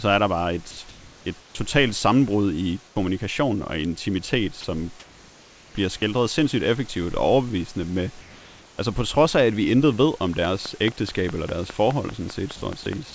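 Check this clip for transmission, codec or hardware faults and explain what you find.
Four kinds of fault appear, three of them tied to the sender's voice detector, plus a click train near the end. The call path itself shows nothing above 8 kHz, which fits a wideband G.722 link.

Sound dropped by the voice detector: at 0.71 to 0.77 s and at 4.61 to 4.64 s, a brief piece of the speech vanishes into a flat hiss, about 50 ms and 30 ms of real sound lost. The likely cause is the detector mistaking quiet speech for background and halting transmission. The receiver then fills the gap with comfort noise until the detector triggers again.

Comfort noise in place of the background: at 0.89 to 1.25 s, 2.87 to 2.96 s and 8.21 to 8.78 s, the natural room background turns into a smooth, detail-free hiss. The first and last stretches hold nearly the same level. The short middle one drops about 15 dB. 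This is likely discontinuous transmission: the sender stops during the pause, and the receiver synthesises noise shaped from occasional spectral updates.

Onset clipped by the voice detector: at 2.92 s, the sound comes back abruptly, with its first 40 ms missing and the soft start gone. That gap sits inside the quiet comfort-noise stretch ending at 2.96 s. The likely cause is that the detector reacted late to the returning sound, so those opening milliseconds were never sent and synthetic noise played instead.

Train of clicks: from 10.45 s to the end at 13.14 s, sharp, near-identical ticks recur at a regular pace of about 4.85 per second. They peak at roughly 15 dB above the signal and stay audible through the pauses as well as over the speech. A steady repeating pulse like this likely comes from electrical interference or a faulty connection or power supply injecting spikes into the chain.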